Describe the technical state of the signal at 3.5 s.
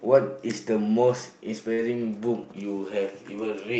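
At 3.5 s the signal is intact, with no fault at that moment, only the ordinary sound of the call path, whose top end stops at about 8 kHz, which points to an Opus codec running in wideband.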